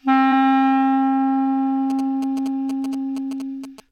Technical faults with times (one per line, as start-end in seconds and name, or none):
0.28 compressed frames skipped
1.90-3.80 GSM signalling bursts